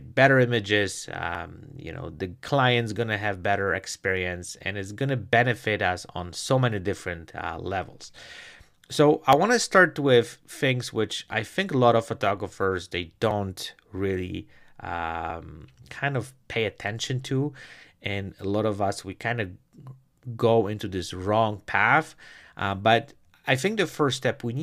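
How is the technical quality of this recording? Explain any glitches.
The speech carries a recurring glitch: overlap between stream segments at 1.35–1.37, 3.34, 9.33 (after "so i"), 11.32, 13.31 and 15.30 s. Overlapping segment timestamps made the player trim 12–20 ms of real audio at some of the 2 s segment boundaries, producing brief skips.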